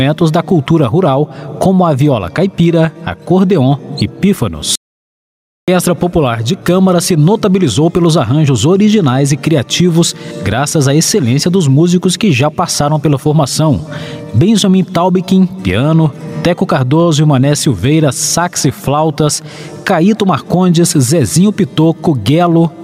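The audio suffers from gain pumping throughout, with the level swinging by roughly 15 dB. Loud and quiet passages sit close together and sound squashed. The likely cause is gain set far too high, with a fast limiter or compressor clamping down on each peak. There is also an audio dropout to silence from 4.75 s to 5.68 s. About 0.92 s vanishes into silence, with no room tone at all. The sound cuts off mid-flow and resumes abruptly. This likely comes from a lost input, such as a disconnected device, a failed link or a brief mute, while the recorder kept writing silence.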